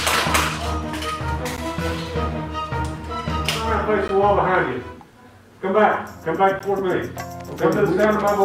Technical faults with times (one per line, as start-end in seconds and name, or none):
1.57 gap between chunks
4.08 gap between chunks
6.59 gap between chunks